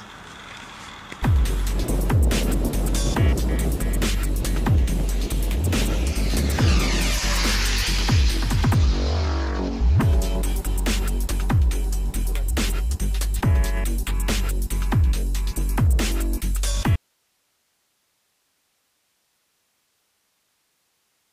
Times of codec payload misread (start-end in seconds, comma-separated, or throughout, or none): none